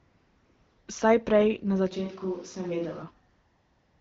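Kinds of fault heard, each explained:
AMR comfort noise: from 0 to 0.87 s and from 3.31 s to the end, no speech frames arrived, so the receiver filled the pauses with smooth, steady synthetic noise.
switch to a distant microphone: from 1.93 to 3.01 s, after "prej na", the sound turns hollow and roomy, about 5 dB quieter, likely from a farther microphone.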